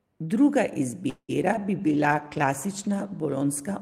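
At 1.09 s the speech stalls in a call audio freeze until 1.31 s, likely from late packets: about 190 ms of fill, fading to 70 ms of silence, then resuming with nothing lost. Right after, short concealed packet loss hits at 1.43 s and 1.53 s, each a 20 ms hole patched over, heard as quick smears. From 1.86 s to 3.09 s a call bitrate drop from 32 to 16 kbps makes the audio coarser and duller.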